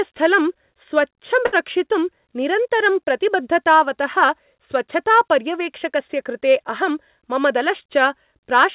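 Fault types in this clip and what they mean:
Short stall from a late packet: Around 1.46 to 1.55 s a packet arrived late and the jitter buffer ran dry, so the receiver held the last sound for about 66 ms and then resumed exactly where it left off, losing nothing but pushing everything after it 66 ms later. On a spectrogram the harmonics at that spot run flat and slightly smeared, below the 4 kHz ceiling of the G.711 mu-law call path. The waveform shows a repeated, slightly dipping stretch.
Jitter buffer speed-up: Just after "निरन्तरं प्रतिबद्धतावतः स्वच्छतापर्यवेक्षकस्य कृते", from about 6.90 to 8.53 s, the buffer held more audio than it wanted. The receiver trimmed it by repeatedly cutting out tiny pitch-period slices, roughly 70 ms in total, so the sound plays about 4% fast at an unchanged pitch. A spectrogram shows the harmonic spacing unchanged while syllables are subtly compressed in time. 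The waveform has small seams where cycles were removed.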